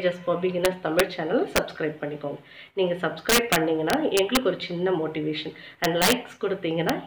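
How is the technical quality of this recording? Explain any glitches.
Technical quality is compromised by integer overflow, which recurs five times: 0.65–1.00 s, 1.56–1.58 s, 3.30–4.37 s, 5.84–6.12 s, and briefly at 6.89 s. During these loud passages the level exceeds the largest representable integer by about 1 to 8 dB. Instead of being held at full scale, each excess peak wraps to the opposite sign and jumps across the whole range. The result is harsh, violent cracks far sharper than clipping, worst in the long 3.30–4.37 s stretch.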